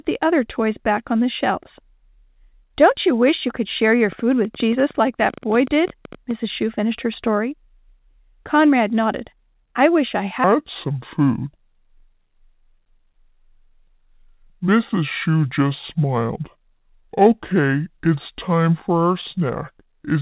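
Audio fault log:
4.12–6.32 s, train of clicks: after "you could share your", about 30 same-shaped pops at roughly 11 per second, unevenly spaced and near speech level. Unlike random crackle, they're uniform, likely interference.
10.44–20.21 s, section at the wrong speed: from "nodded I wish I" to the end, playback runs at 0.633 times speed, likely a clock mismatch. Pitch drops about seven semitones and tempo slows together, unlike a pure pitch shift.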